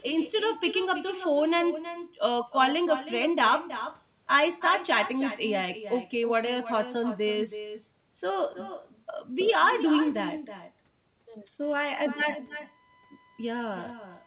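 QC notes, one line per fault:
Throughout, echo with no canceller: every phrase gets a quieter, thinner shadow about 12 dB down, trailing by roughly a third of a second. The far end is playing our audio on a speaker, its mic catches it, and nothing strips it out before it returns.
11.63 to 14.27 s, USB whine: a steady 1 kHz tone comes in and rides to the end, faint, somewhere around 35 dB under the signal. That pitch matches the USB bus's 1 ms frame timing leaking into the audio through power or ground.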